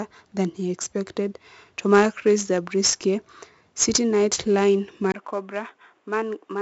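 From the start, the speech carries 4-bit ADPCM compression: each sample is coded as a coarse step from a prediction, so a gritty hiss rides on every loud syllable and sharp attacks distort. Nothing passes above 7.7 kHz, which fits a 16 kHz sample rate at 64 kbps. Unlike a plain low-pass, the noise rises and falls with the speech.

At 5.12 s a 20 ms silence opens, and the rest of the clip turns boxy, about 5 dB quieter, with nothing above 3.8 kHz and a new noise floor roughly 40 dB down. This is likely an input switched to a poorer device. The gap and the changed noise set it apart from a gradual filter change.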